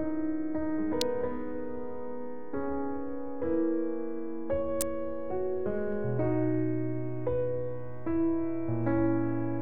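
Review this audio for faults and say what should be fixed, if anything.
Sharp snaps at 1.01 s and 4.81 s are an electrical switching spike, likely a nearby switch or motor arcing into the line. Each appears as a vertical spike on the waveform and a broadband stripe on the spectrogram. Use shielded, balanced cabling away from switched loads.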